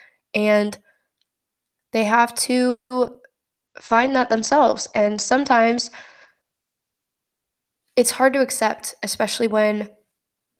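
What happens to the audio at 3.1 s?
Short concealed packet loss hits the speech three times, at 3.04–3.07 s, 3.07–3.10 s and 3.14–3.17 s. Each time, about 20 ms of audio arrives too late. The decoder extends the preceding sound to cover it, then blends back. The result is a brief smeared, wobbling patch.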